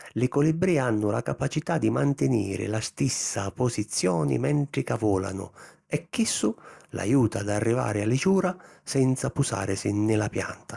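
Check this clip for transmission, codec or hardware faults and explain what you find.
Nothing wrong turned up on a listen through this speech recording, so there's no fault to report here.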